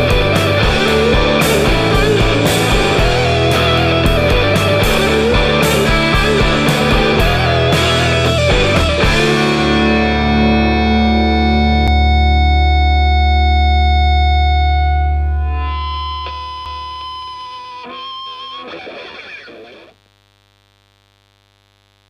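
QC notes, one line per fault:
Throughout: mains buzz. A steady, raspy buzz sits roughly 40 dB below the programme, built on a 50 Hz fundamental. Sharp switching spikes, such as from a dimmer, rectifier or unshielded lead, enter twice per mains cycle, so the interference carries dense harmonics well past 1 kHz into several kHz. On a spectrogram this shows as a comb of evenly spaced horizontal lines at 50 Hz multiples running the full length. In the waveform, quiet stretches reveal a fine periodic spike train at 100 Hz.
11.87 s and 16.65 s: CD skip. At each point the playback mutes for only a few milliseconds, heard as a small tick, then resumes from a different spot on the disc. This happens because a knock or a surface flaw made the laser jump to another turn of the spiral track, so the sound jumps abruptly in continuity. A waveform shows a brief flat gap followed by a discontinuous restart. 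A spectrogram shows a thin vertical broadband click and a hard seam where the content changes.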